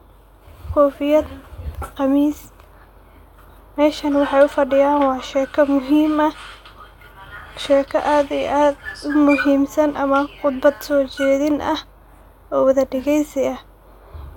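No technical faults can be heard anywhere in the speech. Nothing in the recording calls for a timestamp or a repair.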